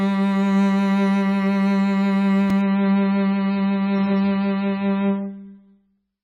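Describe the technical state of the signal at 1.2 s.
At 1.2 s the music plays through intact, with no audible technical fault at that moment.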